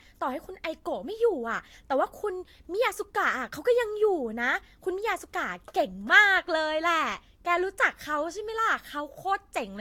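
From start to end, the speech sounds swirly and hollow, with a watery smear over consonants and blunted attacks, and nothing above 18.7 kHz. This is generation loss, likely from the audio being run through a lossy codec about three times, the character pointing to Vorbis at around 70 kbit/s. Each re-encode quantised the signal again on a shifted frame grid, so noise and spectral gaps stacked up beyond what one pass would leave.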